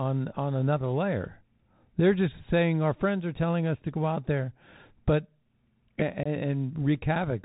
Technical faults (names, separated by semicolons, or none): Bluetooth CVSD headset codec; unconcealed Bluetooth headset packet loss